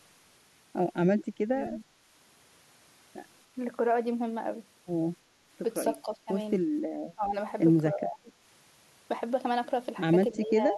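The speech dips at 1.48–1.57 s, 6.02–6.29 s, 7.15–7.34 s, 7.9–8.32 s and from 10.31 s to the end, likely speech suppressed in double talk by an echo canceller.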